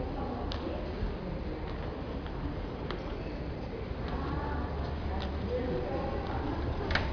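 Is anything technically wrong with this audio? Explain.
No, nothing in this audio points to a technical fault.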